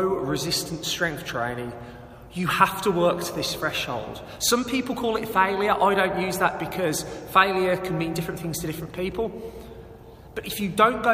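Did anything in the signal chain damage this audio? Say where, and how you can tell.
No, nothing in the signal chain audibly damaged this audio, and the signal stays continuous and intact at every stage.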